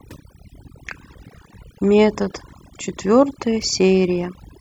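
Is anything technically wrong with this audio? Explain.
Yes. Throughout this speech clip there is overdone noise removal. A noise reduction stage was pushed too hard, so any frequency band sitting close to its noise estimate gets pulled far down or switched off entirely, and the quieter components of the speech are cut along with the noise. What remains is a background that drops and breaks up into twinkling, chirpy specks.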